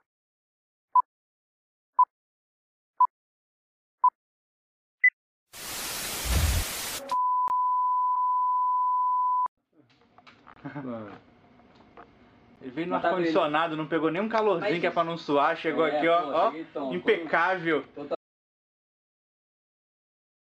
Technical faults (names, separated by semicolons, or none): gap between stream segments; audio dropout to silence